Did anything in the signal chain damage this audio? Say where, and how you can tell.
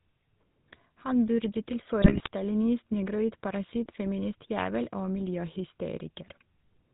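Yes. The codec stage throughout: GSM full-rate coding, which fits a 13 kbps link, cuts everything above 4 kHz and leaves a buzzy, gravelly roughness on the speech.

The network link at 2.02 to 2.28 s: GSM bit errors corrupt the decoder's filter, pitch and gain values, so the speech briefly breaks into squawks and gargling, which fits roughly 3% of bits flipped.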